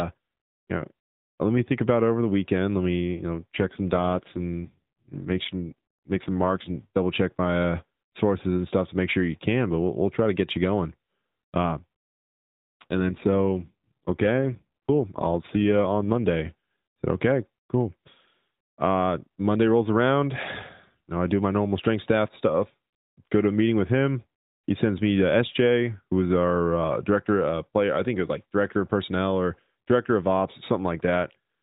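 From 3.54 to 6.88 s, after "me you know", and from 12.81 to 16.27 s, an AMR rate drop turns the speech buzzier and more synthetic. It fits the codec being pushed from 12.2 to 5.9 kbps. The spectrogram keeps its 4 kHz ceiling with no gap, but the harmonics smear.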